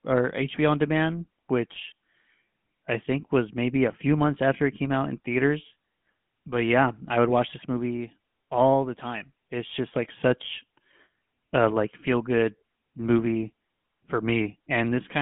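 The speech in this clip has been passed through the GSM full-rate codec from start to finish. The codec models the vocal tract and excites it with a sparse, regularly spaced pulse train, discarding most of the fine excitation detail, and the damage is plainly audible as a buzzy, gravelly roughness over the voice. The sound is held to a telephone band of about 150 Hz to 3.4 kHz, with nothing above 3.6 kHz, which fits a 13 kbps GSM channel.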